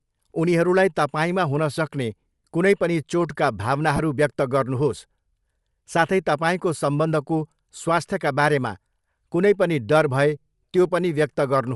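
From start to end the speech carries Bluetooth LC3 compression damage, likely from an LE Audio link's transform codec running at a modest rate; the character of the artefacts fits about 48 kbps with short 7.5 ms frames. At that rate the encoder discards much of the upper spectrum and substitutes generated noise, so the speech has a plainly audible breathy, grainy edge on its higher frequencies.

From 3.96 to 4.00 s comes a burst of lost LE Audio frames, a gap of 22.5 ms that matches three consecutive 7.5 ms frames going missing. The decoder covered the hole by replaying the last received spectrum with scrambled signs rather than the real signal. For that instant the speech turns into a brief noisy smear, a rough hiss-like blur in place of clear detail, before normal decoding resumes.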